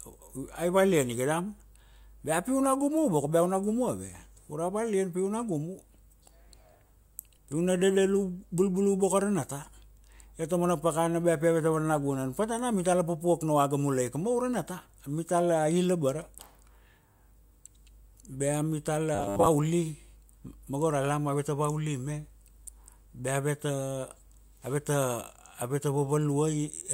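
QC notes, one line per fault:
19.15–19.47 s, robotic sound from repeated short buffers: the speech becomes a rigid metallic buzz locked at 100 Hz, likely from a 10 ms chunk looped over most of the span while new audio ran late. Unlike codec warble, the buzz rate stays fixed.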